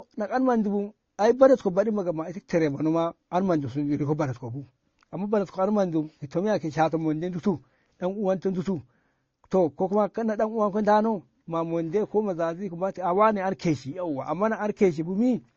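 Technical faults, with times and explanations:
Throughout, transcoding between lossy codecs: likely an MP3 encode re-encoded to Opus, stacking both codecs' artefacts on the speech and leaving nothing above 7.9 kHz.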